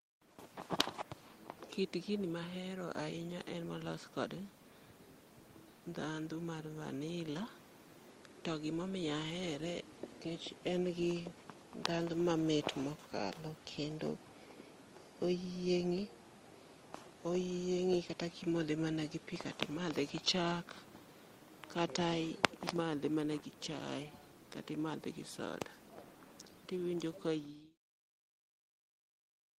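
Nothing faulty turns up in the speech, and the level simply eases down in a smooth fade-out from around 27 s to 27.78 s with no click or hard edge.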